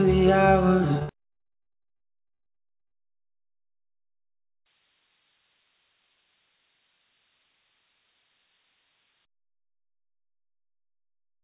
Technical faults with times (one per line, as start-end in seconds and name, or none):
0.94-2.93 repeated packet loss (robotic sound)
1.26-3.35 jitter buffer slow-down
4.66-9.25 switching supply whistle